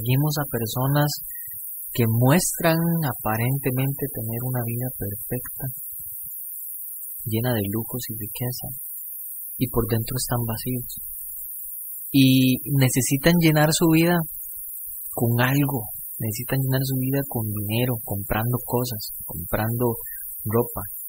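From the first second to the end, the speech carries a steady hiss from low bit depth with noise shaping, nearly as loud as the speech itself. Rounding error pushed into the treble makes it rise sharply toward the top, fitting a word length near 6 bits. Unlike broadband tape hiss, it thins out low down.

Throughout, the speech also sounds watery and swirly, with metallic chirps on s sounds and softened onsets. This is likely MP3 compression at a starved rate near 64 kbps, where quiet frequency lines drop in and out between frames. That flicker, unlike the steady hiss, shifts with the speech.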